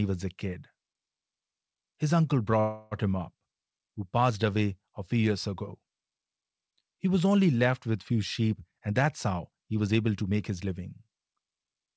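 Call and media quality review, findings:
Buzzy, fading continuation of the last sound, 2.60 to 2.94 s, just before "him up". Call audio freeze, likely late packets draining the jitter buffer. Receiver filled about 0.31 s; nothing lost, but later audio shifted by that gap.

Hurried delivery at unchanged pitch, 8.53 to 10.73 s, right after "only left with few". Jitter buffer speed-up: buffer overfilled, receiver cut repeated pitch-period slices, about 0.3 s in total, running near 114% speed. G.722 band limit at 8 kHz throughout.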